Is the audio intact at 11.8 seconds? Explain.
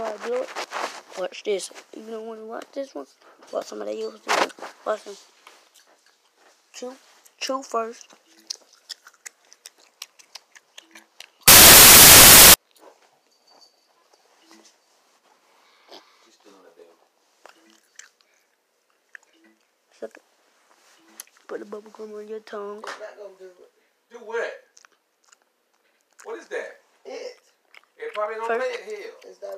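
No. From 11.48 to 12.54 s, samples are built from the wrong bytes: misaligned or swapped bytes make the fast-changing low bits dominate, which turns the sound into broadband noise.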